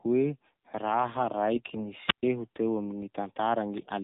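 From start to finish the speech passes through the AMR narrowband mobile codec. It runs at a low mode, and the sound fits roughly 7.4 kbps. The signal is sampled at 8 kHz and rebuilt from a vocal-tract model excited by a sparse set of pulses. So nothing reaches above 4 kHz, and the voice comes out muffled, thin and distinctly buzzy, with a synthetic edge that is plainly audible throughout.

Between 1.56 and 1.81 s, AMR bit errors corrupt the stream. Bits in the weakly protected part of each frame flip, at a rate of a few percent, while the core bits still pass their check, so the decoder accepts the damaged frames. The excitation pulses are placed wrongly and the fine pitch, gain and spectral detail drift. For about a quarter of a second the voice holds its rough pitch and loudness but turns hoarse, scratchy and gargly.

From 2.07 to 2.23 s, a wireless microphone squelch dropout occurs. 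The FM radio link fades far enough that the receiver's squelch shuts the output. Hiss or static rises briefly, and then a gap of near silence lasts about 126 ms before the voice returns.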